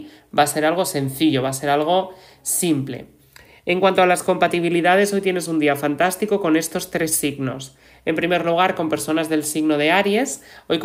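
No technical faults can be heard anywhere in this audio.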